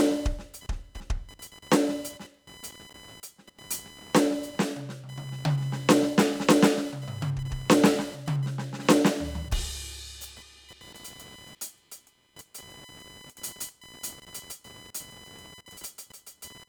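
Computer activity noise runs throughout the music: a thin buzzing whine pulsing at around 1 kHz, sitting roughly 25 dB below the music. It arises because the computer's changing processing load disturbs the ground shared with the audio circuit, so it tracks that activity, not the music.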